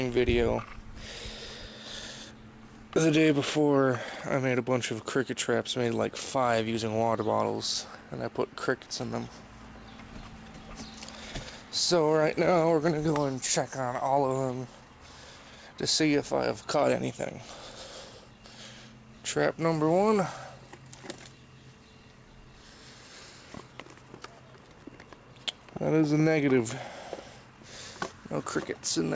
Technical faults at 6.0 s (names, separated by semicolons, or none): none